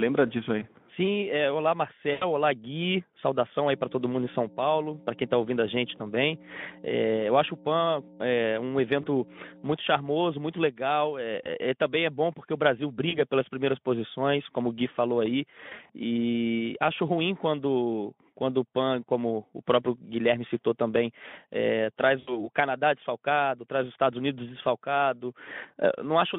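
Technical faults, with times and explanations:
0.59–0.64, 2.11–2.24, 5.97–6.01, 9.01–9.06, 11.43–11.48, 13.09–13.21, 15.69–15.90, 22.19–22.48 s, VoIP packet loss concealed by the speech codec: brief buzzy, smeared stretches that fade out. Lost 20 ms frames, and longer gaps of 100 ms, 80 ms (after "citou também é"), and 120 ms scattered between "falou aí" and "e acho ruim quando", are filled by extrapolating the last pitch with decaying gain.
3.71–9.64 s, mains hum: a steady low 60 Hz drone about 15 dB below the speech, sitting under the narrowband Speex-coded voice. The power line is leaking into the signal, likely through a ground loop or a nearby transformer.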